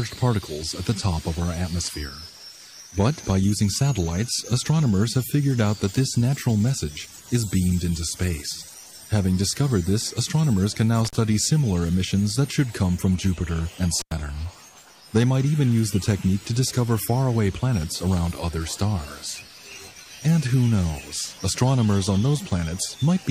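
Intermittent contact at 11.05 s and 14.00 s: a loose connection briefly opens, cutting the sound for about 46 ms, then 95 ms, with crackle at each edge.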